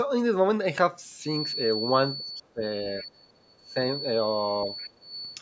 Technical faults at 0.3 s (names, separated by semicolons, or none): none